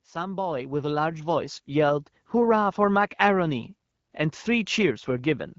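Speech clip with automatic gain rising from 0.12 to 2.26 s: the gain control judged the input too quiet and lifted it gradually by about 9 dB, so voice and background swell up together. The AMR wideband (HD Voice) coding sounds fairly clean, consistent with a mid rate around 12.65 kbit/s.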